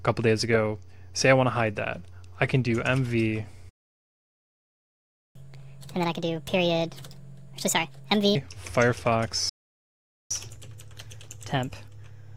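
Playback stall at 3.69 s: the sound cuts out mid-flow for 1.66 s until 5.35 s, likely because the player ran out of buffered data or its thread was blocked. Catch-up at higher speed follows from 5.35 to 8.35 s. The player drains its backlog at 1.5 times normal speed by resampling, so pitch jumps by roughly seven semitones before settling back. A second playback stall from 9.49 to 10.31 s silences the output for 0.81 s. A milder catch-up then runs from 10.31 s to the end at 1.15 times speed, raising pitch by roughly two semitones.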